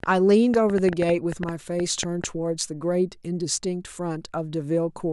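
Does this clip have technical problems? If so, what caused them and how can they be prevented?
Yes. From 0.04 s to 2.25 s the speech carries a train of clicks, around fifteen sharp pulses at about 5.9 per second with uneven spacing, peaking roughly 10 dB above the speech and audible in pauses as well. The repeated, similarly shaped pulses are likely interference from nearby equipment or a faulty connection or power supply. To prevent it, keep phones and switching supplies away from cables and use a stable, well-grounded audio interface.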